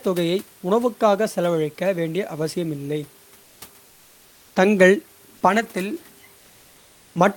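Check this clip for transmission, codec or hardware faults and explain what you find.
One fault type appears three times: comfort noise in place of the background, at 3.43–3.61 s after "வேண்டிய அவசியமில்லை", 3.85–4.51 s before "தங்கள் பணத்தில்", and 6.37–7.15 s after "தங்கள் பணத்தில்". The likely cause is discontinuous transmission such as Opus DTX muting the sender during pauses. The receiver then fills each gap with steady, featureless noise about 2 to 3 dB quieter than the real room background.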